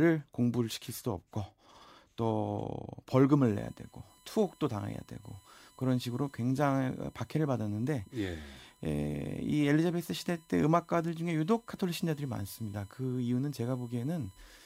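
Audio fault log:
3.45–14.65 s, USB whine: a faint, steady 1 kHz tone, roughly 35 dB below the speech, from 1 ms USB frame current leaking in; too high-pitched for mains hum.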